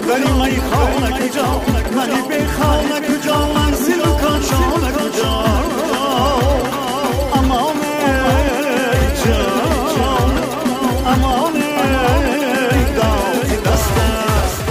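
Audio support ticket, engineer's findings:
Doubled audio track throughout. Full-band copy trails roughly 0.7 s behind, about 5 dB down, no decay or room colour. Likely a second capture path or misaligned edit.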